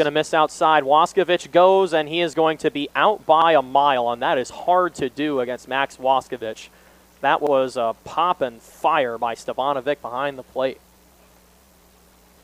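At 3.42, 7.47 and 11.52 s there's a little stutter, a clear case of overlapping chunks: the audio arrives in 4-second blocks, each starting 50 ms before the previous one finished, so that sliver plays twice at every join.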